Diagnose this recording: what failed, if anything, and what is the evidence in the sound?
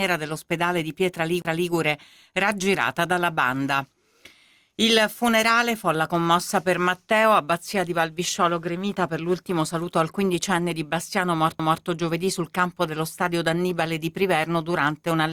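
The failure is at playback: two CD skips, where the disc player lost its place on the spiral track. The first is at 1.42 to 1.45 s, with a brief mute of roughly 30 ms; the second is at 11.59 s, with a shorter mute of around 10 ms. Each is a tick or momentary dropout, after which the sound resumes from a different point, because the laser jumped across to another turn of the spiral, from a knock or a flaw in the disc, and the player silenced output while re-tracking.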